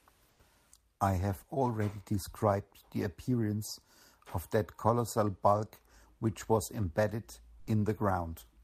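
At 0.31 to 0.39 s, the background, sitting about 38 dB below the loudest speech, turns for 80 ms into a steady, featureless hiss about 5 dB quieter. This is likely comfort noise in place of the background, from Opus discontinuous transmission pausing and synthesising noise.

At 7.59 to 7.67 s, roughly 30 ms of speech vanishes and flat noise fills an 80 ms gap before the sound resumes. This is likely sound dropped by the voice detector, which mistook the speech for background and stopped sending.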